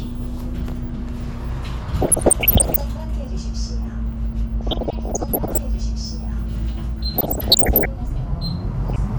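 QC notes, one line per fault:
2.01–2.81 s, DAB burbling: bubbly, squelchy chirps over the sound as bit errors of around one percent slip past error correction and make individual sub-bands jump in level.
4.61–5.58 s, DAB burbling: the longest stretch, with a slightly lower error rate, under one percent. It still gives that muddy bubbling as corrupted scale factors throw single bands up and down frame by frame.
7.16–7.86 s, DAB burbling: back to roughly one percent errors, so the chirps and squelches return as wrong samples land in the MP2 data for a run of frames.
8.88–8.98 s, DAB burbling: a brief blip of the same gurgle near the end. The errors are under one percent and hit only a handful of frames, so it's over quickly.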